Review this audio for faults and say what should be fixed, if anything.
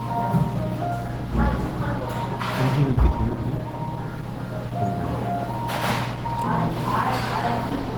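Throughout the clip, the sound carries the artefacts of heavy low-bitrate compression, with nothing above 20.1 kHz. This is likely low-bitrate audio saved at a high bitrate, consistent with a 16 kbit/s Opus source re-encoded as 256 kbit/s MP3. To prevent it, encode from the original uncompressed source rather than from an already-compressed copy.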